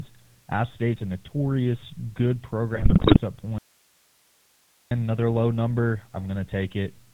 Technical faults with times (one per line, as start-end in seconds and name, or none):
0.00-7.13 GSM full-rate codec
2.74-3.20 GSM bit errors
3.58-4.91 audio dropout to a faint residue